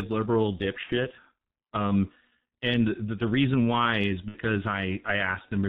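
From the start, the speech is squeezed through the G.723.1 codec at about 6.3 kbit/s, and the damage is heavy. Nothing above 4 kHz survives, so the voice sounds muffled. The codec works in 30 ms frames and refreshes its model of the voice slowly. That makes the tone hoarse and smears the consonants together. This coloured, dull quality runs through the whole clip.

At about 0.83 s, VoIP packet loss concealed by the speech codec appears. Until 0.95 s the decoder has nothing new to work from. It repeats its last pitch and filter and lowers the gain frame by frame. The gap sounds like a buzzy tone or coloured noise that fades. About 60 ms is missing, which fits two lost frames. The same fault returns at 4.28 s, just after "the reason why is", and lasts until 4.38 s. The voice stays weak or distorted for a moment after each gap, because every frame builds on the last.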